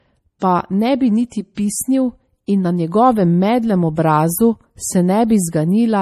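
Throughout the speech, the audio was likely encoded first as a low-bitrate MP3, then saved again at a high bitrate: low-bitrate audio saved at a high bitrate. The larger second file cannot restore what the first removed, so nothing sounds above 14.6 kHz.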